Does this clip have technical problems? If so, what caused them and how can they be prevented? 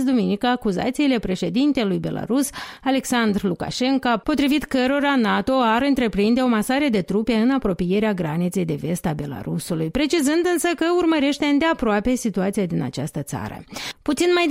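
Yes. At 9.36 s there is a block of digital silence about 4 ms long. The signal drops to zero and returns with no fade, so it is heard as a single tick. A block of samples was zeroed, either because the output buffer missed its deadline or because a calculation produced invalid values. Prevent it with larger audio buffers or higher thread priority, and by checking for invalid values in the processing chain.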